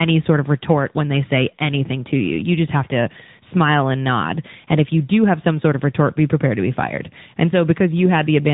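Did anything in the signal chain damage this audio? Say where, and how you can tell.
Yes, at the codec stage, throughout the clip: tandem speech coding. The speech passed through CVSD at 64 kbit/s, then G.711 A-law, then AMR-NB at 10.2 kbit/s, decoded and re-encoded at each hand-off, so each coder worked on the previous one's errors. Nothing survives above 3.8 kHz, yet this is more than plain band-limiting: the voice is rough and warbly as well as muffled, worse than a single AMR-NB pass would leave it.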